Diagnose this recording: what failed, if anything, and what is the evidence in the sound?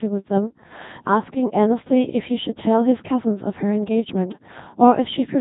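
Codec stage: a Codec 2 vocoder runs throughout, making the speech robotic and buzzy with nothing above 3.7 kHz. The resynthesised sine-wave voice fits roughly 2.4 kbit/s.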